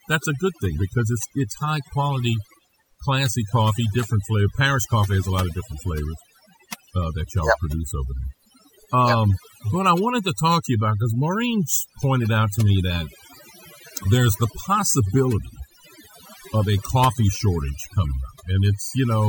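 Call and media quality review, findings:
Overdone noise removal, present across the whole speech clip. Background collapses to near silence with twinkling specks. Probable component: noise suppressor set too aggressive. It drives individual bands down whenever they sit near its noise estimate, so quiet voice detail is removed too. Unlike a low-bitrate codec, the damage follows the noise floor rather than the bitrate, and the gaps between phrases drop low and twinkle instead of staying hissy.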